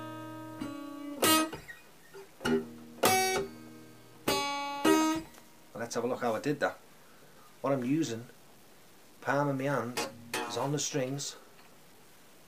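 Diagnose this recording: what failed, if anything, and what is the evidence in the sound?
The sample-format conversion likely truncated the audio to 8 bits without dither, giving low bit depth without dither. Throughout the clip a grainy distortion sits around 30 dB below the signal and tracks it, turning quiet passages gritty.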